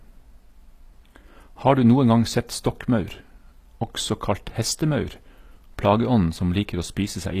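Speech with HE-AAC compression throughout, likely the cause: treble is rebuilt rather than coded, sounds plainly processed, stops at 14.9 kHz, and fits a bitrate near 24 kbps.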